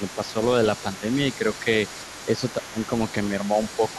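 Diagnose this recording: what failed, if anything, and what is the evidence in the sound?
The call processing stage's echo canceller likely mishandled double talk, leading to speech suppressed in double talk. Unable to tell the near talker from loudspeaker echo while both sides spoke, it turned the microphone signal down. A brief, shallow dip of around 5 dB touches the speech between 0.0 and 0.36 s. A heavier one, roughly 15 dB deep, pulls the speech down from 2.26 to 2.79 s, for about a third of a second in total.

The same echo canceller also appears to have left residual echo in place, so the other side's voice is leaking through for the whole recording. The far end, played on the talker's loudspeaker and picked up again by the microphone, was not fully subtracted. A second, fainter voice sits under the speech from start to finish at roughly 20 dB below it, quiet.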